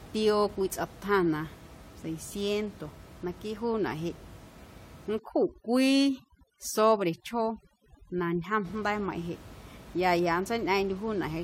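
From 5.19 to 8.65 s, overdone noise removal sets in. An over-aggressive suppressor mutes bands near its noise estimate, leaving twinkling specks.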